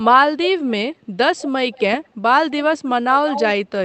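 At 1.72 to 1.82 s, 2.04 to 2.08 s and 3.27 to 3.43 s, a delayed copy of the speech comes back about 175 ms behind the original. This is an echo leak, likely from a far end playing the call on a loudspeaker whose echo canceller let residual pickup through. The first scrap sits roughly 20 dB down and the second is barely audible. The last is strongest, around 10 dB under the speech and carried through the Opus path's 8 kHz band.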